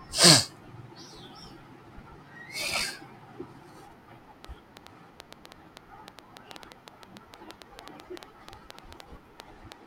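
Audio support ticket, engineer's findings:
Train of clicks, 4.45 s to 9.73 s: around thirty similar pulses at about 6.3 per second, unevenly spaced, ticking well above the speech and through pauses. Likely interference pickup or a faulty connection or power supply injecting repeated transients.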